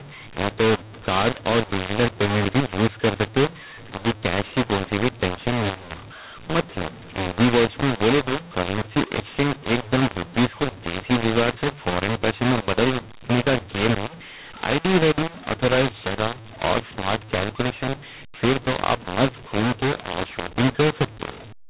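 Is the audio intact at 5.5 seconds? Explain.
No. At 5.5 seconds the speech is harsh and gritty, its loudness lurching unevenly, and the pauses are filled with a hiss instead of silence. This is a mix-up of mu-law and A-law, and it runs through the whole clip. The telephone audio was coded with A-law at 8 kHz but decoded as mu-law, so each sample lands on the wrong level. Some levels are inflated, some shrunk, and near-silent samples are lifted into audible noise.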